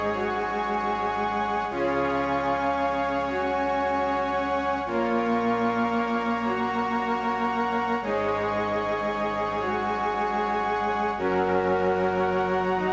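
No technical faults are present; the audio went through a call path whose band stops at 8 kHz, consistent with a G.722 codec at 64 kbps.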